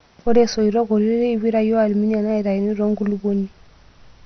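From start to finish the speech is dull and carries a gurgling, granular distortion, which points to heavy MP2 compression at a low bitrate, likely around 48 kbps. Nothing is left above about 6.2 kHz, because the encoder has run short of bits and switched off the upper sub-bands entirely. The bands that remain are coarsely quantised and drop in and out, giving the watery, grainy texture familiar from low-rate digital radio.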